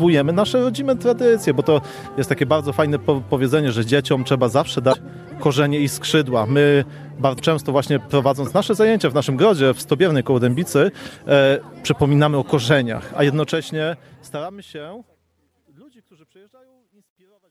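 At 4.90–4.95 s and 7.36–7.40 s, damaged data in the compressed stream breaks the decoder's frame sync, showing as brief broadband smears or gaps on the spectrogram. From 13.16 s, truncation distortion on the fade turns the shrinking waveform into visible square steps, which fits an undithered 12-bit stage. It is grittiest from 15.8 s to the end, with spurious harmonic spray.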